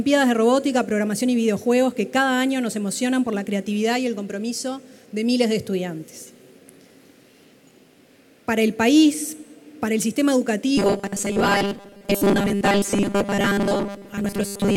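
From 10.78 s to the end, robotic sound from repeated short buffers, likely from starved input replaying a 5 ms chunk, imposes a fixed 200 Hz buzz that, unlike hum, still loosely tracks the sound.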